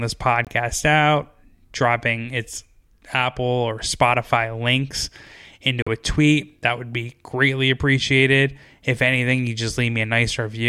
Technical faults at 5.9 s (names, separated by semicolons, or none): Bluetooth dropout